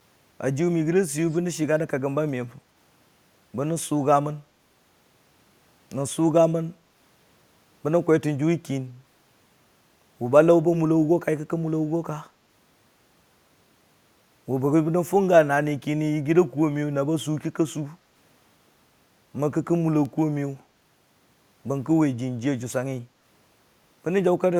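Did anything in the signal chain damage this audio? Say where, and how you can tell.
Yes: an echo leak at 1.27 to 1.39 s in call processing, a very faint copy trailing by 216 ms, likely a far-end echo canceller missing loudspeaker pickup.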